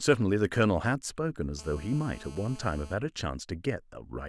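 From 1.59 to 2.94 s, GSM phone buzz cuts across the speech as a hard, raspy 217 Hz drone about 22 dB down. On a spectrogram it appears as a steady comb of harmonics.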